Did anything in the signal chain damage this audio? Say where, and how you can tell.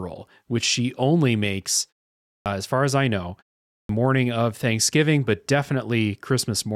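Yes. At 2.38 s and again at 3.81 s, speech resumes abruptly out of silence with its opening sounds missing: about 79 ms lost at the first point (to 2.46 s) and about 82 ms at the second (to 3.89 s). Each follows a pause of roughly half a second (0.54 s and 0.47 s). This is a clipped start after a pause at the playback stage. The output device sleeps during silence and needs time to wake or relock, so the first sounds never reach the output.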